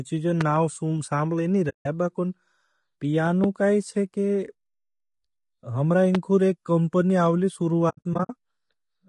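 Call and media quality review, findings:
Speech throughout sounds rough and grainy, with hiss between voice harmonics and a thin, synthetic-sounding top band. Likely low-delay AAC compression (AAC-ELD): short frames resolve harmonics poorly, and the damage is plainly audible, consistent with roughly a 32 kbps stream.

Loud pops: single sharp pops riding on top of continuing speech, at 0.41–0.43 s (about 10 dB above the signal), 3.44–3.46 s just before "काई छे", and 6.15–6.17 s just before "एक कमपणी आओली" (both about 15 dB). Each is likely a voltage spike from a plug, switch, static or driver glitch.

AAC frame loss with muting: soft-edged silent holes. The first runs 1.69–1.86 s (160 ms, fitting eight lost frames). The second follows "एक कमपणी आओली", with 220 ms of gaps scattered over 7.89–8.30 s, longest around 70 ms. The decoder zeroed the missing frames, and the overlapping windows fade the sound out and back in.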